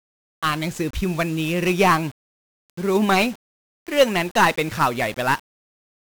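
1-bit DFPWM compression runs through the whole speech clip. Each sample is reduced to a single bit nudging an adaptive level up or down, which fits a stream of about 48 kbps, so heavy broadband quantisation noise leaves every syllable fuzzy and crackling, with the upper frequencies sunk under hiss.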